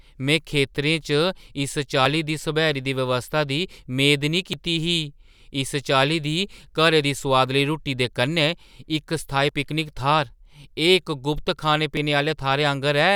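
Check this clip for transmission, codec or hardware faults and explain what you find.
There is one fault, repeated: audio missing between chunks, at 2.06, 4.53, 7.01, 9.49 and 11.97 s. The likely cause is a processor losing roughly 20 ms at each 2.5 s chunk boundary, so the speech skips abruptly at these regular intervals.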